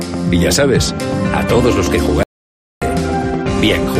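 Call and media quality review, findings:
Audio dropout to silence, 2.23–2.82 s: sound cuts out mid-flow, 0.59 s of dead silence with no room tone; likely input loss (disconnected device, failed link or mute) while recording continued.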